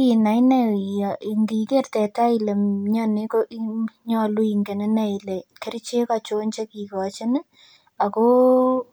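Speech recording, no technical faults detected.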